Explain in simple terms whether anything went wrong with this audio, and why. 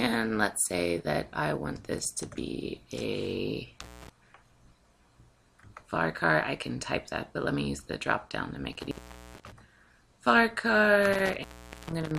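The sound cuts out three times because of an intermittent contact, a loose cable or plug briefly losing its connection. The first break runs from 3.81 to 4.09 s, with the line open for about 0.22 s. Two longer ones follow, from 8.73 to 9.52 s and from 11.13 to 12.18 s, each open for about 0.44 s. A network dropout would fall to clean silence, but here each gap starts and ends with crackle and leaves faint hiss in between.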